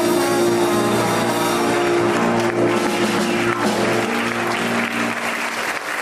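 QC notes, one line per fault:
No fault found.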